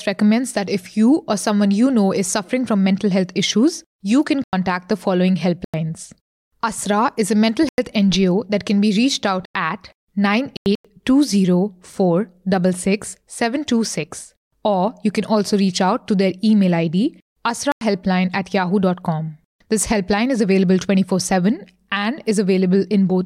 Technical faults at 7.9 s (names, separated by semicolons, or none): corrupt frame muted